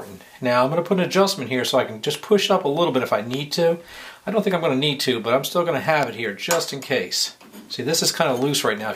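Two sharp pops cut through the audio, one from 3.34 to 3.36 s and another from 6.03 to 6.05 s. Each is a single brief crack that jumps well above the surrounding level while the sound carries on beneath it. These are loud pops, most likely from a sudden voltage step or pulse, such as a plug, switch, static discharge or driver glitch, entering the signal path and being shaped into a short click by the circuitry after it.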